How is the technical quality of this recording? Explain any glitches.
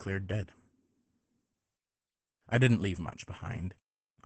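The recording is heavily degraded from start to finish by Opus voice compression. The codec ran its SILK speech coder at a very low bitrate, consistent with about 10 kbps, limiting the audio to wideband and coding the excitation coarsely. Nothing remains above 8.7 kHz, so the speech throughout sounds muffled, hoarse and slightly robotic.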